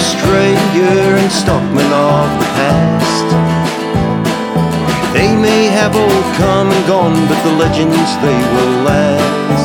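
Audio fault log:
Nothing here to log, as no faults turn up anywhere in this audio.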